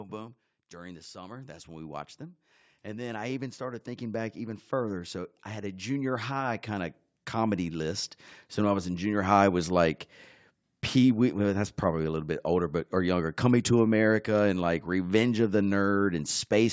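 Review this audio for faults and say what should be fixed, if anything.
Automatic gain rising from 0.72 s to 9.38 s, ending just before "was like": the gain control judged the speech too quiet and raised its gain slowly by about 16 dB, so the voice and background swell together across nearly nine seconds. To prevent it, set the microphone input level properly before recording and turn off automatic gain control, or fix its gain, so it doesn't ramp up mid-clip.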